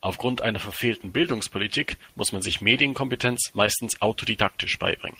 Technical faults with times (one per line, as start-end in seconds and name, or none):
1.22 short concealed packet loss
3.66 short concealed packet loss